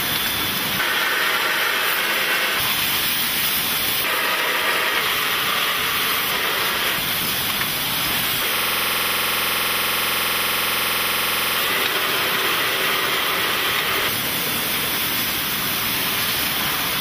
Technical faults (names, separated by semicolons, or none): system hang loop